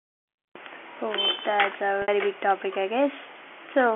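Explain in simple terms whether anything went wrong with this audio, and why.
One fault occurs: packet loss with pitch repetition, from 2.02 to 2.08 s, right after "that's a" and before "big topic I". About 60 ms of audio went missing, which fits three lost 20 ms packets. To cover the gap, the receiver kept repeating the last cycle of the voice, so the sound briefly holds with a slightly buzzy tone before the real speech cross-fades back in. The narrow telephone-band sound of the line is simply how this kind of call carries audio.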